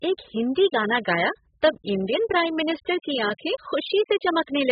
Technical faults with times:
0.00-4.72 low-bitrate audio saved at a high bitrate

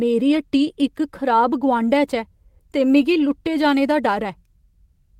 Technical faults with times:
none

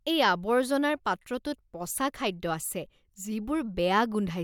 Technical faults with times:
none

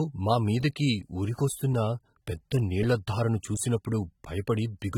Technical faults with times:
0.00-4.98 AAC compression

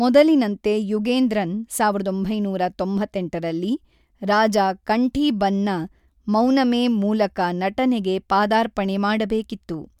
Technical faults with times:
none

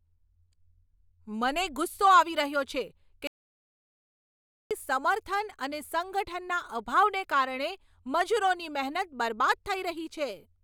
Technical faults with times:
3.27-4.71 audio dropout to silence

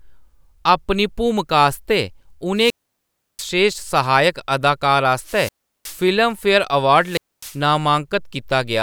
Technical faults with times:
2.55-3.52 wireless microphone squelch dropout
5.17-6.10 wireless microphone squelch dropout
6.97-7.62 wireless microphone squelch dropout

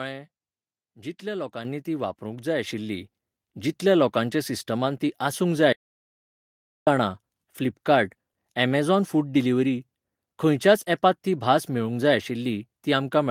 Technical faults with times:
1.65 microphone volume stepped up
2.67 microphone volume stepped up
5.73-6.87 audio dropout to silence

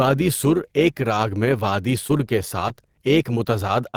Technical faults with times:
0.00-3.97 overlap-add ripple
2.07-2.11 short concealed packet loss
2.17-2.21 short stall from a late packet
2.68-2.72 short concealed packet loss
3.91-3.95 short concealed packet loss

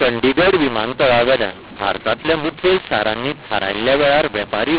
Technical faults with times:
0.00-4.79 mu-law and A-law mixed up

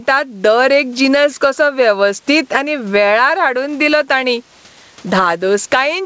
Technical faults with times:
0.00-6.05 gain pumping

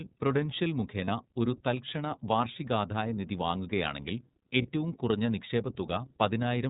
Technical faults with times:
0.00-6.69 iLBC codec
1.04-1.09 lost iLBC frames
4.62-4.66 lost iLBC frames

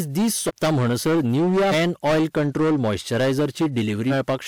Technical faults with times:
0.00-4.48 hard clipping
0.47-0.51 compressed frames skipped
1.71-1.74 compressed frames skipped
4.09-4.12 compressed frames skipped

